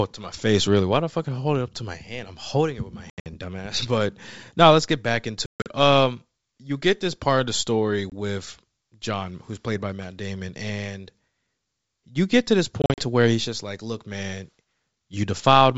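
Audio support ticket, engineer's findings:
Packet loss on an ADPCM call: dropped packets become hard silent gaps. The decoder's predictor and step size then lose sync, so audio resumes slightly distorted. Gaps at 3.10–3.27 s, 5.46–5.69 s after "now let's get back", 8.10–8.13 s after "part of the story", and 12.82–13.02 s between "you get to this" and "to where he's just". The wideband G.722 path carrying it sounds consistent with 64 kbit/s mode.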